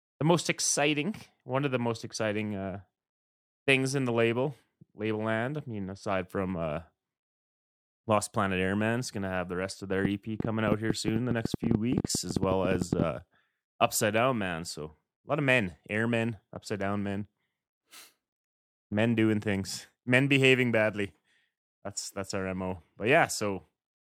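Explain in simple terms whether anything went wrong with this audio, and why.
A train of clicks runs from 10.05 to 13.03 s, right after "the rest of their": about thirty uneven pops, ten a second, likely from nearby electrical interference.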